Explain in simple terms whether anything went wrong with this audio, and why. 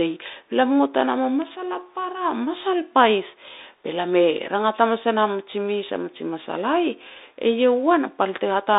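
Yes, two things went wrong. The whole recording of speech passed through a Bluetooth CVSD headset codec, the basic phone-call mode of a wireless headset. It keeps only roughly 250 Hz to 3.7 kHz, so the voice sounds thin and boxy, with scratchy s sounds and a grainy hiss underneath. That constant graininess sets it apart from a simple low-quality microphone, which would sound dull but clean.

Separately, there are two single sharp ticks, at 1.42 s and 5.39 s. Each is a bit error spike, where one stored digital value was briefly corrupted and then went straight back to normal. Each is one instant click with no crackle or gap around it, which is how it differs from a dropout or a scratchy connection.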